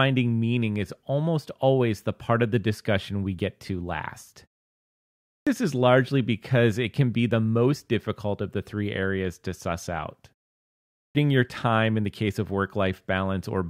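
Speech where, after pauses of 0.79 s and 0.64 s, the sound at 5.18 s and 10.90 s begins abruptly without its first 0.29 s and 0.25 s: clipped start after a pause, as the output device wakes from silence.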